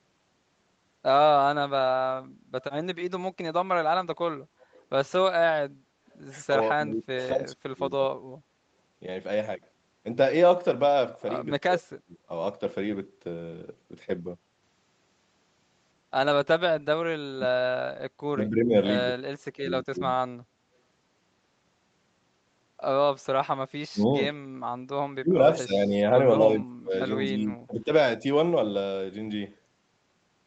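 At 6.11 to 6.19 s there's a faint echo leak, a very quiet copy of the speech trailing about 227 ms behind, likely a loudspeaker echo the canceller didn't fully remove. Speech suppressed in double talk follows at 6.49 to 8.25, 11.46 to 12.31, 16.62 to 20.2 and 23.92 to 27.91 s, where the speech dips deeply or cuts out in pieces. That's likely the canceller mistaking the talker for echo. Within that last stretch, at 24.45 to 24.59 s, the background is gated by the echo canceller, and the room sound drops about 16 dB for a moment before coming back.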